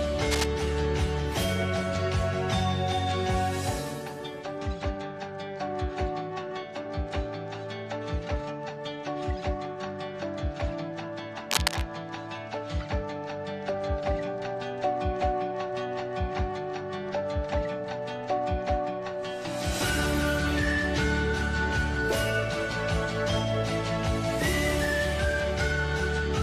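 Two short bursts of cable scratch noise cut in, from 0.31 to 0.46 s and from 11.48 to 11.82 s, with rough, uneven crackle roughly as loud as the sound itself. It's likely a worn lead or connector being moved, its contact flickering.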